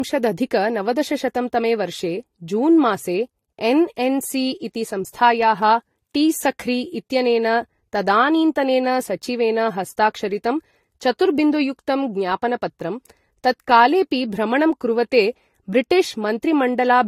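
Speech that is damaged throughout, with nothing above 16.5 kHz and two different kinds of compression artefact heard together. The likely cause is transcoding between lossy codecs, with the character pointing to an AAC-type encode followed by a Vorbis re-encode at a similarly low bitrate. A single lossy encode leaves one consistent artefact texture. Here the second encoder has spent bits on the first one's artefacts and added its own, so the artefacts stack.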